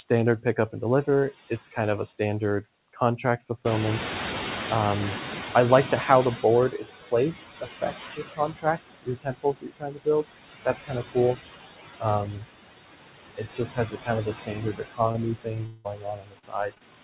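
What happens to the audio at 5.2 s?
At 5.2 s the noise suppressor is catching up. Room noise jumps by about 18 dB at roughly 3.5 s, and the suppressor's noise estimate lags behind it from 3.64 to 6.70 s. The noise therefore comes through with less reduction, about 13 dB, and sinks as the estimate adapts over those 3.06 s.

Noise suppressor artifacts also run through the whole clip. The suppressor cuts bands it judges to be steady noise by about 17 dB, frame by frame, so the remaining noise rises under the speech and sinks between words.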